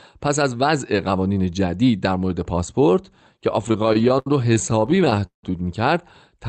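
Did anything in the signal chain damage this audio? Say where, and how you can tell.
Yes: repeated stalls (stutter) at the network and jitter-buffer stage, from 3.68 to 5.44 s. Across 26 short gaps, the longest 170 ms, the receiver stretched the last sound over 478 ms. On a spectrogram that shows as smeared, repeated frames fading out, with the Opus call path's 8 kHz ceiling still visible.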